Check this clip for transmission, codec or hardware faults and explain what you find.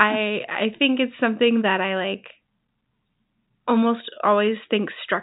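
No faults found here.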